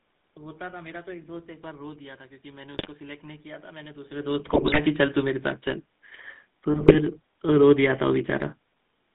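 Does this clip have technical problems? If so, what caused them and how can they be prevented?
Yes. The GSM full-rate codec squeezes the signal into a low-rate vocal-tract model, consistent with 13 kbps, and band-limits it to about 150 Hz to 3.7 kHz. This gives the speech a buzzy, gravelly roughness throughout. Carrying the call over a wideband or higher-rate codec would prevent this.

GSM bit errors on a weak radio link corrupt the decoder's filter, pitch and gain values. This produces squawks, pops and gargling at 2.74–2.89 s, 4.46–4.79 s and 6.72–6.99 s, with the middle burst the densest. A stronger signal or better error protection on the link would prevent them.

The room noise in the background and the level change around 4 s, when the talker moved, come from the recording itself.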